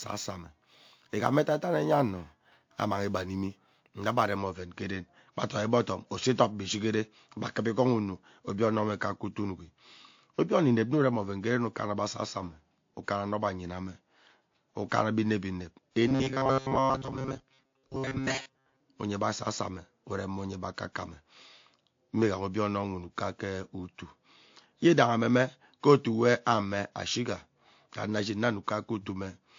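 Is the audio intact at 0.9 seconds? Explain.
No, at 0.9 seconds two problems overlap. The first is sample clock jitter, running from the very start to about 4.37 s. The converter's clock is wobbling by a few microseconds, so each sample lands a touch early or late. That timing slip matters most where the waveform moves fast, so you hear a faint hiss or grit riding on the louder, brighter parts of the speech, roughly 35 dB down, and it drops away in the pauses.

The second runs through the whole clip: nothing is left above 7.2 kHz, and there are two different flavours of compression mush stacked on top of each other. That's most likely transcoding between lossy codecs, where a 48 kbit/s MP3 was re-encoded into WMA 1 at 64 kbit/s. The second encoder wastes bits re-coding the first one's artefacts and adds its own, and the lowest cut-off in the chain is the one that stays.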